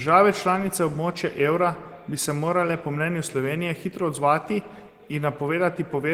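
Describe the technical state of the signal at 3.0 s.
At 3.0 s the signal is intact, with only the light coding damage of Opus voice compression in its hybrid mode and no fault present.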